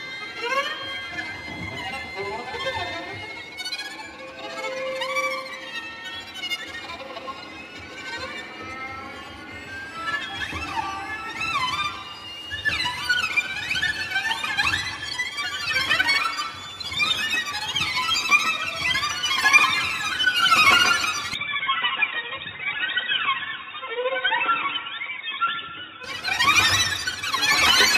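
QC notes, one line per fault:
21.34–26.04 s, input likely switched to a poorer device: sound turns boxy with nothing above 3.8 kHz, about 5 dB quieter, new faint background noise, unlike simple filtering.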